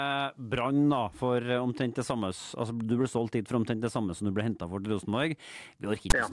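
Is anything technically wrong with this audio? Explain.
Yes. From 6.10 to 6.13 s, near the end of the speech, a short, harsh rasp with abrupt edges cuts in, lopsided as if pushed toward one side of the waveform, then drops into dead silence. This is file tags played as audio: a block of text metadata, followed by zero padding, was decoded as sample data. The character bytes produce the offset rasp, and the padding zeros produce the silence.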